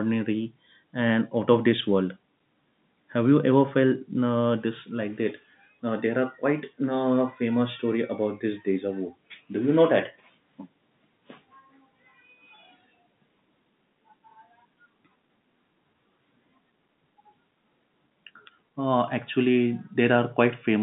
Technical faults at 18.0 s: none

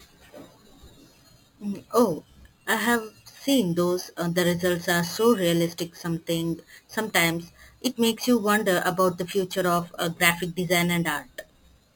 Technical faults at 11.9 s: imaging from sample-and-hold upsampling

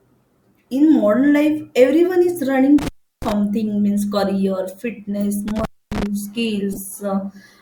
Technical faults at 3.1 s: intermittent contact

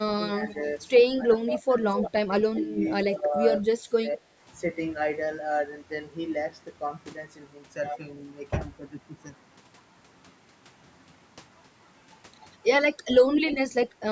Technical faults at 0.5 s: echo leak

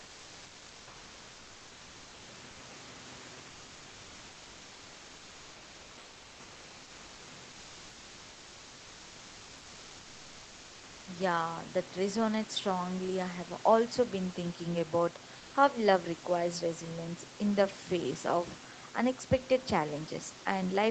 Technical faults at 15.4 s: comfort noise in place of the background

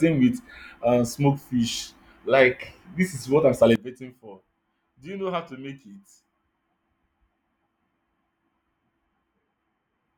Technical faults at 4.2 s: sudden gain jump

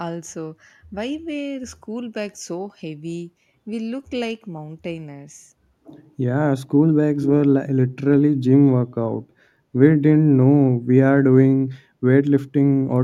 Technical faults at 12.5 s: none

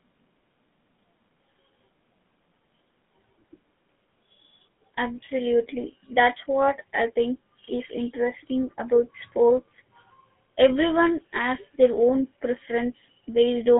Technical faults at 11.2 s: GSM full-rate codec

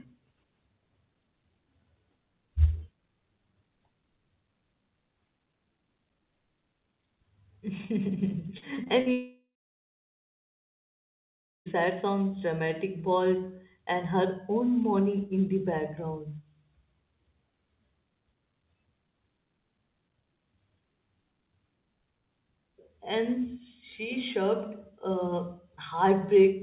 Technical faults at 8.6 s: repeated packet loss (robotic sound)

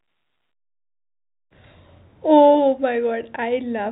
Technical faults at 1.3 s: none

